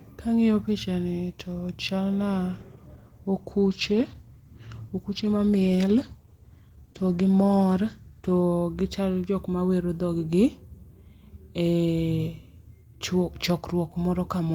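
Speech that turns rough, watery and dulled from 2.5 s to 8.49 s, losing its crisp top end before clearing again. That stretch is a call bitrate drop. The call's bandwidth estimate fell, so the encoder was told to spend far fewer bits. Opus then quantised the speech more coarsely and trimmed the high band. The degradation points to a fall from around 32 kbps to about 14 kbps, held for roughly 5.9 s.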